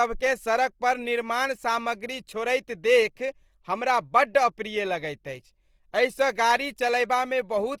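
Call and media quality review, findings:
Grainy, rough speech throughout. Likely Opus compression in music (CELT) mode: each band's energy is held, and bit-starved bands are refilled with folded or noise content, so harmonics go noisy instead of swirling. Spectrogram shows full bandwidth to about 20.2 kHz, few holes, and harmonic stripes smeared into fuzz. Damage plainly audible, fitting a rate around 24 kbps.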